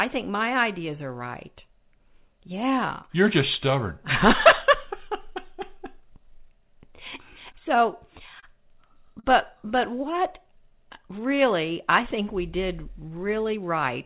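Between 7.52 and 8.45 s the speech shows scattered short gaps: about four lost or late packets, each patched by continuing the previous sound, the longest around 30 ms. They are heard as small ticks and smears. On a spectrogram, brief stretches of harmonics run flat and unchanging where they should be moving.

From 9.20 to 9.26 s there is a short stall from a late packet. The jitter buffer ran dry, so the receiver held the last sound for 40 ms until the packet arrived, and nothing was lost. The sound lingers too long. On a waveform, one cycle shape repeats almost identically, and the delay grows by 40 ms.

From 9.92 to 11.36 s, ending just before "I think we did", there is a jitter buffer slow-down. To rebuild its reserve, the receiver repeated pitch periods and bits of pauses, adding 77 ms in total. The speech plays at 95% speed with unchanged pitch and sounds slightly drawn out. On a spectrogram, the harmonic streaks are stretched sideways with the spacing between them unchanged.

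Throughout, the band stops at 4 kHz, which fits a G.711 mu-law call path at 64 kbps.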